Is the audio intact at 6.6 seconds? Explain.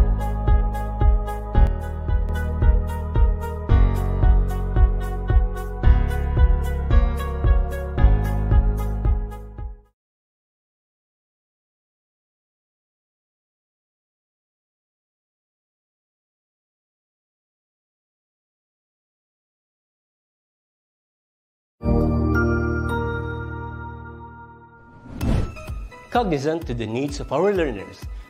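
Yes, the audio at 6.6 seconds is intact, with no dropout, click, distortion or other fault at that moment.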